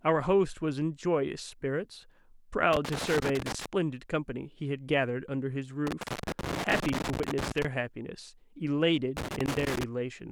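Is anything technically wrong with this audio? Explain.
Yes. Loose connector crackle appears three times in this speech clip: from 2.73 to 3.66 s, 5.87 to 7.65 s, and 9.17 to 9.84 s. A worn or dirty contact in the signal path is intermittently losing and regaining connection as it shifts, chopping the audio into fragments, while any DC on the line turns each make and break into a pop. Each burst is an irregular scratching crackle over the speech, with the longest lasting nearly 1.8 s.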